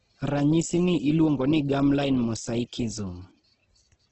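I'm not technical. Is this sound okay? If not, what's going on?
No. From start to finish the speech sounds grainy and rough, with nothing above about 8.2 kHz. This is likely heavy Opus compression, which sounds gritty rather than swirly like MP3.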